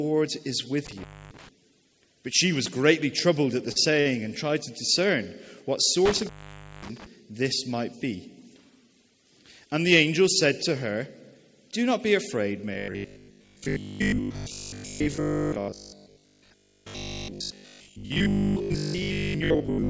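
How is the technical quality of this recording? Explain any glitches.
The recording has three kinds of fault. It passed through a G.722 call path, so nothing is heard above 8 kHz.

Intermittent contact appears twice, at 0.86 to 1.49 s and at 6.05 to 7.06 s. A loose cable or plug briefly loses connection. The first time, the line stays open for about 272 ms. The second time, it stays open for about 537 ms. Each time the sound cuts out, with crackle as the contact breaks and remakes. Faint hiss fills the gap.

A short stall from a late packet happens twice, close together. The first is at 3.72 to 3.91 s, filling 38 ms. The second is at 4.00 to 4.07 s, filling 49 ms. In each case a packet missed its slot and the jitter buffer ran dry. The receiver held the last sound until the packet arrived, then carried on from the same point. No sound is lost. A moment just lingers too long, with a slight buzz or dip.

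Robotic sound from repeated short buffers runs from 12.74 s to the end. A rigid, metallic 50 Hz buzz sits on the sound and roughly tracks it. The likely cause is new audio arriving too rarely. The software keeps replaying the last short buffer while real audio is skipped. A 50 Hz buzz fits a 20 ms buffer. Roughly two thirds or more of this stretch is repeats.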